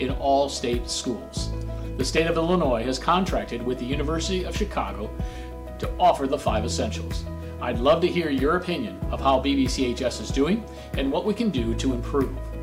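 Clock drift buffer slips from 2.18 to 11.24 s: about five regular clicks every 2.27 s, likely two unsynchronised clocks several hundred ppm apart forcing dropped or repeated blocks of about 70 samples.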